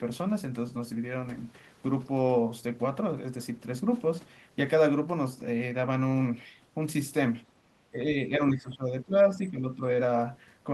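Speech suppressed in double talk, 7.91 to 9.81 s: the speech dips about 10 dB, likely an echo canceller ducking it as both sides talked.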